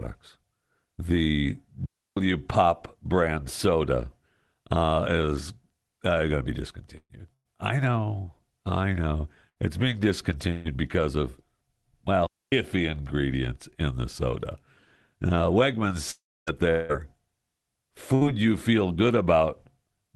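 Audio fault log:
1.86–2.17 s and 12.27–12.52 s: digital wireless dropout. The wireless link lost too much data, so the receiver muted almost instantly. This leaves clean holes of near silence, about 0.31 s and 0.26 s long, with no burst of noise before or after.
6.97–7.13 s, 7.34–7.48 s, 9.49–9.59 s, 10.52–10.68 s and 18.15–18.24 s: burst of packet loss. Runs of packets totalling about 60 or 120 ms went missing, and the receiver stretched the last sound into a fading buzz or hiss. In the first two, this fades into roughly 50–60 ms of silence. The audio then resumes further on, with the missing part skipped.
16.11–16.50 s and 16.71–16.92 s: long network dropout. The last sound is held as a fading buzz or hiss for about 0.36 s and 0.18 s. In the first, it sinks into about 0.26 s of silence. The audio then returns further on, with the missing stretch gone, likely because the network delivered no audio for those stretches.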